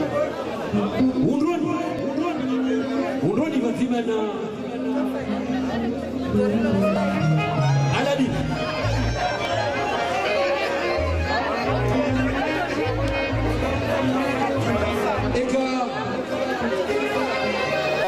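Six brief skips occur at 1.99, 4.47, 6.96, 9.45, 11.94 and 14.43 s. They are spaced about 2.5 s apart. Each is audio missing between chunks. The likely cause is processing in 2.5 s blocks that drops about 10 ms at each handover. The sound then jumps abruptly.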